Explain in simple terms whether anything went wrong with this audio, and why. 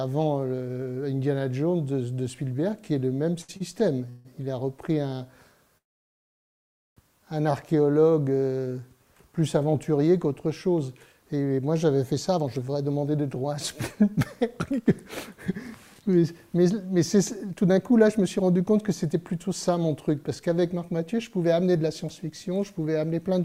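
Around 3.41 to 3.51 s and again at 3.57 to 3.62 s, a sound is briefly held too long. These are short stalls from a late packet: the receiver stretched the last sound while waiting, then carried on.

At 4.09 to 4.27 s the sound hangs as a fading buzz, and from 5.78 to 6.99 s it goes silent for over a second. This is a call audio freeze, likely caused by packets held up on the way, and nothing is lost.

From 12.30 s to the end the audio runs about 7% fast at the same pitch, sounding hurried. This is a jitter buffer speed-up: the receiver trimmed tiny slices, under a second in total, to catch up.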